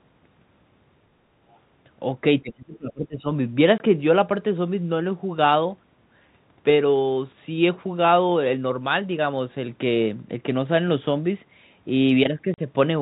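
At 1.51 to 1.58 s a faint scrap of the other side's voice leaking through appears, about 40 dB below the talker, likely because the echo canceller left some loudspeaker pickup in the microphone. Unlike suppression, nothing is removed. An extra second voice is added.

From 2.42 to 3.25 s comes speech suppressed in double talk. The talker's level dips by as much as about 25 dB, in pieces adding up to around 0.7 s, likely because the echo canceller pulled everything down while both sides spoke.

Packet loss filled with silence follows at 3.78 to 3.80 s, a 20 ms gap that fits one lost packet, and again at 12.54 to 12.58 s, a 40 ms gap pointing to two. These hard-edged blanks of fixed length differ from the dips of double talk. The G.711 telephone band limit at 4 kHz is audible throughout.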